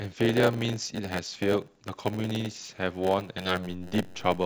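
Right from the start there's a block size mismatch with padding: one stage hands over blocks a bit shorter than the next stage expects, so each block ends in a sliver of silence. That gives a steady buzz at about 91.9 Hz, and the speech drags to 0.919 times normal speed with its pitch basically unchanged. Then at 3.69 s a DC step hits: the waveform's zero line suddenly jumps and stays offset through the end of the clip. You hear it as a single low thump, and the speech carries on through it untouched.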